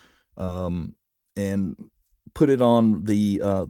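A short stretch of speech carries one short concealed packet loss at about 0.45 to 0.50 s. About 20 ms of audio never arrived in time, and the receiver covered the hole with roughly 22 ms of sound extrapolated from what came just before, then crossfaded back into the real signal. It is heard as a brief smear or wobble.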